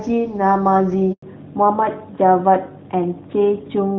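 At 1.12 s a handover gap cuts the speech for 100 ms while the call switches networks; no frames arrive, so that stretch is simply lost. From 1.22 s onward the call falls back to narrowband, with nothing above 4 kHz, making the speech duller and rougher. The sound points to a drop from AMR-WB at around 12.65 kbit/s to AMR-NB at around 12.2 kbit/s.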